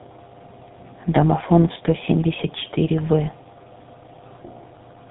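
Throughout the speech, tandem speech coding leaves it rough, muffled and warbly. The sound fits two low-rate coders in a row, likely AMR-NB then GSM full rate, the second re-coding the first's damage. A spectrogram shows nothing above 3.8 kHz and smeared, wavering harmonics.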